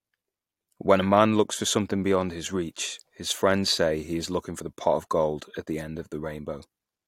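At 0.62 s and again at 4.60 s, just after "say he is looking", the speech skips: overlap between stream segments. Adjoining segments, roughly 4 s apart, claimed the same time span, so the player discarded about 16 ms and 5 ms of genuine audio, splicing the waveform abruptly.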